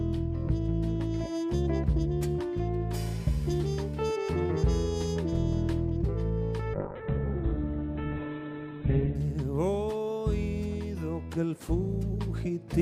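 At 6.74 s a call bitrate drop sets in and lasts until 9.23 s. The encoder falls from 128 kbps to 8 kbps and holds at the bottom for about 2.4 s. At that rate it codes the sound coarsely and narrows the band from 20 kHz to 4 kHz, so the audio turns muffled and watery. On a spectrogram everything above 4 kHz vanishes under a flat ceiling until full bandwidth returns.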